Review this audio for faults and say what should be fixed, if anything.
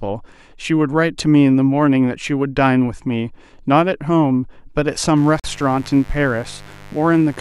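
A dimmer, rectifier or poorly shielded cable is letting sharp switching spikes from the 50 Hz supply into the signal path, twice per cycle. From 5.17 s to the end, that gives a steady, raspy mains buzz about 25 dB below the speech, with harmonics stacked well up into the kilohertz range. Preventing it means keeping audio cables away from dimmers and power supplies and using properly shielded, grounded leads.

A wireless link likely hit interference, so packets were held up, the headphone buffer emptied, and playback halted until retransmissions arrived. This Bluetooth stall cuts the speech to silence for 43 ms, from 5.40 s to 5.44 s. Reducing radio congestion and keeping the source close to the headphones would stop it.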